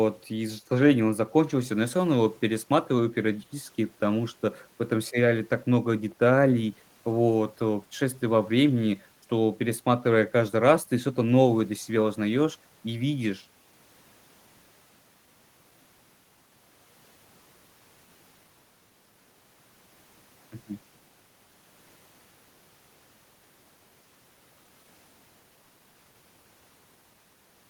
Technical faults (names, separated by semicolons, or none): none